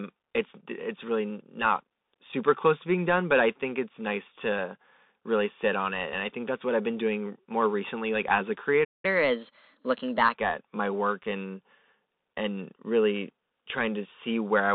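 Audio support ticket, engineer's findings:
Narrowband, muffled speech across the whole clip, with nothing above 4 kHz and usable band roughly 200 Hz to 3.7 kHz. Scratchy s sounds, granular hiss under the speech, loud bright peaks smeared. Bluetooth CVSD headset codec, consistent with the 64 kbps link. One-bit up/down coding with an adaptive step cannot follow fast, loud high-frequency movement.

Playback stall at 8.84–9.05 s: audio cuts out mid-flow for about 0.19 s of silence, then resumes. Player output starved, likely a buffer underrun or a blocked playback thread.

Catch-up at higher speed at 9.05–10.34 s: speech runs fast and pitched up about two semitones, then settles back. Player resampling at 1.15x to drain the backlog and recover the time lost in the stall.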